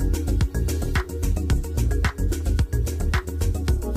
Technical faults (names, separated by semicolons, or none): none